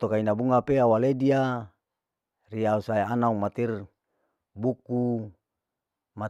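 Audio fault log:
No faults detected.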